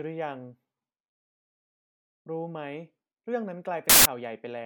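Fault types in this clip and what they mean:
Samples built from the wrong bytes: a burst of loud, harsh broadband noise from 3.90 to 4.05 s, as misassembled bytes turn jittery low bits into each sample's large part.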